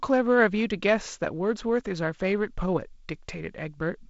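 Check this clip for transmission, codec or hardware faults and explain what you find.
Nothing stood out on listening: the speech comes across as ordinary G.722 wideband telephone audio, with content reaching up to about 7.7 kHz, and no transmission, codec or hardware problem draws attention anywhere in the clip.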